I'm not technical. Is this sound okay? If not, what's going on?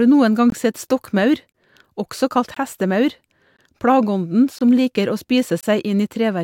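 No. The speech has tiny hard-edged dropouts about once a second, at 0.50, 1.52, 2.54, 3.57, 4.59 and 5.61 s, for example between "sett stokkmaur" and "også kalt hestemaur". This is a gap between chunks: the audio arrives in one-second pieces, and about 21 ms of silence gets inserted at each join.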